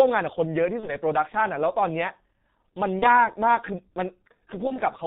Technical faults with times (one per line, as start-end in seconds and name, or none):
0.00-5.06 G.723.1 codec
0.80-0.95 VoIP packet loss concealed by the speech codec
2.99-3.05 VoIP packet loss concealed by the speech codec
4.67-4.82 VoIP packet loss concealed by the speech codec